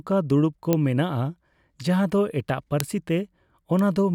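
Bit error spikes occur at 0.73 s, just after "ᱫᱩᱲᱩᱵᱽ ᱠᱚ", at 2.80 s, after "ᱫᱚ ᱮᱴᱟᱜ", and at 3.79 s. In each, a flipped bit throws a sample value off by a power of two before it snaps straight back. The result is a sharp, broadband tick unrelated to the speech, peaking at about -6, 0 and -12 dBFS respectively. The loudest, at 2.80 s, spans two adjacent corrupted samples.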